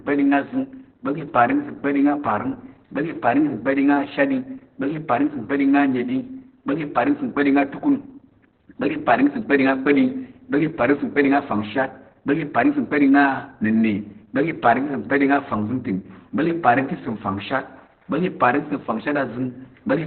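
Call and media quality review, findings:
Opus voice compression, whole clip: speech muffled, hoarse, faintly robotic, nothing above 4.4 kHz. Narrowband SILK coding, coarse excitation; sound points to roughly 8 kbps.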